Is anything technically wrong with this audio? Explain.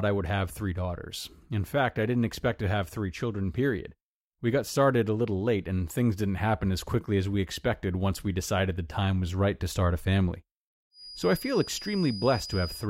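Yes. From 10.9 s, just after "to start a family", a thin, steady whistle near 4.9 kHz sits well below the speech, swelling and fading slowly in level to the end. This feedback whistle likely comes from a loudspeaker-to-microphone loop held right at the edge of feedback, sustaining one tone without running away.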